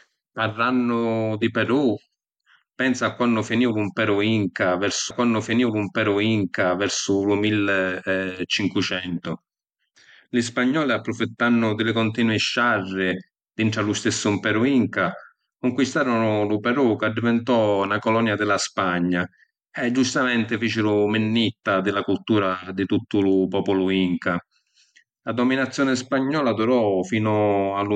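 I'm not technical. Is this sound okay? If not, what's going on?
No, there is one problem. From 5.10 to 7.09 seconds, a stream segment is repeated. About two seconds of the speech play a second time, so you hear the same stretch twice in a row. There is a small blip where the sound jumps back. This happens when the player fetches or queues the same chunk of the stream twice and plays both copies. The speech then continues from where it left off.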